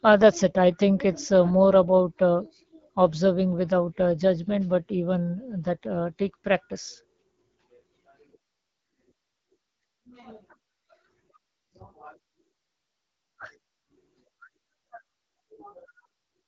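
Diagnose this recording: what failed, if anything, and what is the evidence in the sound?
Throughout the speech the sound is rough and raspy, with a gritty, buzzy edge, while the top of the band carries a hiss-like sheen rather than real detail. This points to the codec stage: the AMR wideband (HD Voice) codec running at one of its lowest rates, which fits about 8.85 kbit/s. At that rate the pulse-driven vocal tract model can only coarsely approximate the excitation below 6.4 kHz, leaving the raspiness, and the 6.4 to 7 kHz region is filled with shaped noise instead of coded signal.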